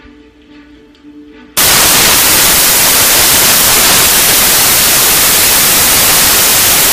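From 1.57 s to the end, the audio turns into loud, harsh broadband noise: samples built from the wrong bytes, so the fast-changing low bits dominate each value.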